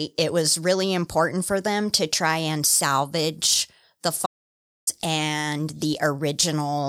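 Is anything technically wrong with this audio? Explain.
Yes. From 4.26 s to 4.87 s the speech drops out to silence for about 0.61 s. The signal cuts off abruptly and returns mid-flow, with no room tone in the gap. The likely cause is a lost input while the recorder kept writing zeros.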